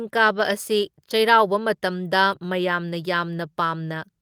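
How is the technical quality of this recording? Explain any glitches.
The recording has two brief glitches, both lost packets rebuilt from error correction. At 0.33 to 0.51 s, then at 2.31 s, the speech turns rougher and noisier without any gap. The first fits several lost packets. The decoder filled each from a low-bitrate backup copy carried in the following packet.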